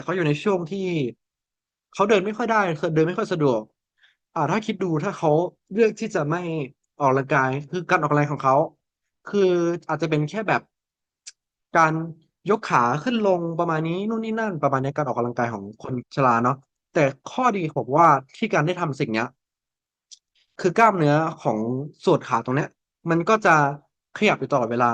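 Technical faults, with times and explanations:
7.93–7.95 s, 11.77–11.84 s, 18.04–18.11 s, 20.80–20.87 s, 23.47–23.56 s and 24.27–24.30 s: hard clipping in this speech, brief crackles on the loudest peaks where the signal overran the stage's ceiling by about 1 dB (about 2 dB at 20.80 s) and the tops were sliced flat. The abrupt corners add high harmonics, which sound like ticks rather than the rounder thickening of soft saturation, and they occur only on peaks.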